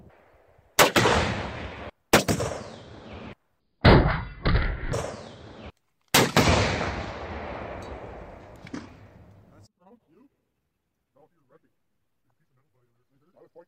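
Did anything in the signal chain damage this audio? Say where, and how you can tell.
No, nothing in the signal chain damaged this audio.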